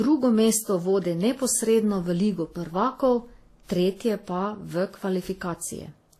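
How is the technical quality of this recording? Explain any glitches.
The recording is compromised throughout. The speech carries layered compression artefacts, and nothing is present above 14.1 kHz. This points to transcoding between lossy codecs, likely a low-bitrate Vorbis encode re-encoded to WMA. The second codec spends bits reproducing the first codec's artefacts and adds its own.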